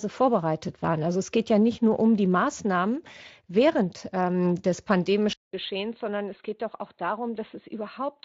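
At 5.33 s, after "während ähm des", a flat 200 ms waveform gap leads into quieter, duller speech, its spectrogram blank above 4.2 kHz: likely an input switched to a poorer device.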